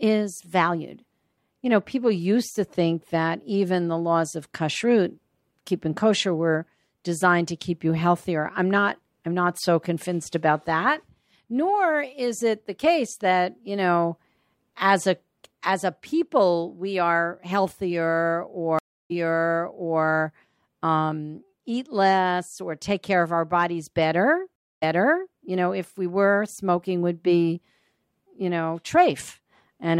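At 18.79 s the speech drops out for about 0.31 s in a stream reconnect, then resumes roughly 0.93 s earlier, repeating audio already heard. At 24.56 s another stream reconnect silences it for 0.26 s. Playback restarts about 0.53 s back.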